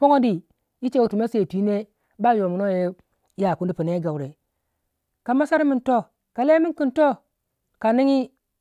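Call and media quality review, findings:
Nothing stood out on listening to the speech in this clip.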